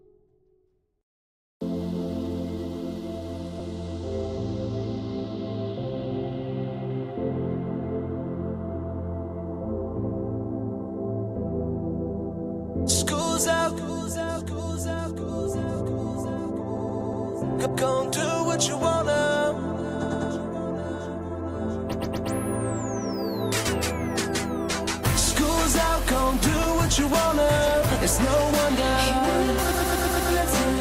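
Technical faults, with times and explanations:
16.77–17.25 s, 20.01–20.31 s, 21.93–22.29 s, 29.71–30.31 s: repeated frames. A short block of compressed audio (120 ms, 100 ms, 120 ms and 120 ms, which fits runs of five or six frames) plays again 4, 3, 3 and 5 extra times, giving a mechanical stutter. Unlike a dropout, nothing is lost; the identical fragment recurs and the audio runs longer, by 480, 300, 360 and 600 ms.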